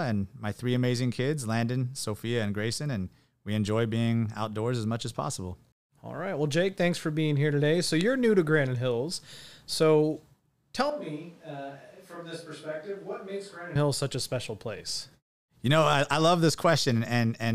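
A speech recording in which, from 10.9 s to 13.75 s, the voice suddenly turns roomy and hollow, loses low-end weight, drops by roughly 10 dB, and sits over background noise only about 25 dB below it. The abrupt change at both ends points to a switch to a distant microphone, likely because the close microphone's feed dropped out and a camera or room microphone covered the gap before the close signal returned.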